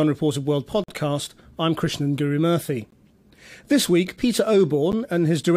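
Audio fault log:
0.84–0.89 s, 2.90 s, 4.92 s: gap between stream segments. The speech stops dead three times, about 2 s apart. The holes last about 46 ms, then 18 ms, then 10 ms. Each has hard edges. The timing fits 2 s segments whose time stamps don't quite meet. The player fills each gap with silence. Nothing is cut from the speech. It is pushed later, which is why the sound resumes intact after each drop.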